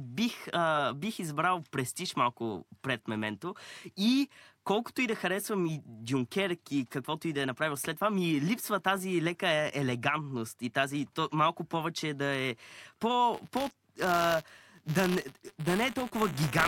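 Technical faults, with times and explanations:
13.34 s to the end, buffer tearing: a steady robotic buzz at 200 Hz rides on the speech. The writing side and the playback side of the ring buffer have drifted so they cross within every 5 ms period, leaving a small slice, a few percent, of each buffer holding audio about 20 ms old. The hard joins on both sides of that stale slice repeat at the buffer rate.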